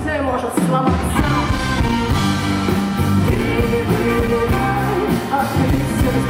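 From 3.03 to 3.42 s the processor falls behind and misses a handful of deadlines for its very short audio buffers, each filled with silence. This processor overload crackle is heard as brief hard-edged dropouts fusing into a gritty, tearing crackle over the sound.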